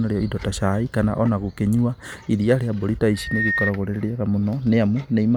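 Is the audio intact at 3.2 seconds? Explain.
No. Just after "mbũri ta", from 3.14 s to 3.73 s, a steady 1.8 kHz tone swells out of the speech over roughly a third of a second and rings at about the same loudness as the speech before cutting off. This is loudspeaker feedback squeal: the microphone was picking up the loudspeaker it fed, and at 1.8 kHz the loop returned more than it sent, so that frequency kept reinforcing itself.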